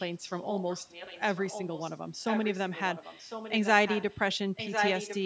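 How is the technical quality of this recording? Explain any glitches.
The recording has one recurring problem, an echo leak, so the speech is shadowed by a delayed copy of itself.

Echo leak occurs from 0.0 to 1.98 s, 2.23 to 3.68 s, 3.86 to 4.2 s, and 4.55 s to the end. It trails the speech by about 1.05 s and is likely loudspeaker pickup that the call's echo canceller failed to remove. It starts faint and grows until it matches the speech. A spectrogram shows the same harmonic patterns repeated a second later.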